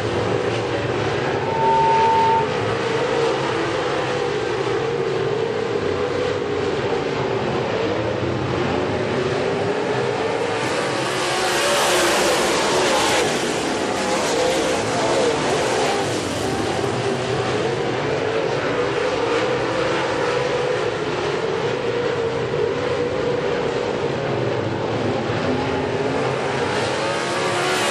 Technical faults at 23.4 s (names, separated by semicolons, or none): none